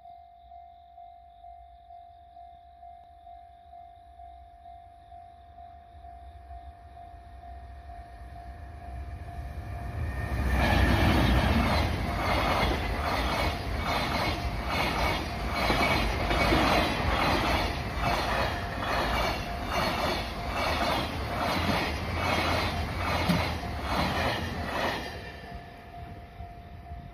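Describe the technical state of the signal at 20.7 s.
Nothing is wrong with the signal at 20.7 s; the audio is intact at that point.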